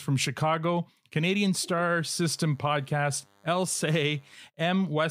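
From 1.83 s to 4.35 s a DECT cordless phone buzz sits under the speech: a nearby handset or base transmits short radio bursts 100 times a second, and the audio circuitry rectifies them. The result is a thin, steady 100 Hz buzz rich in harmonics, low but audible beneath the speech.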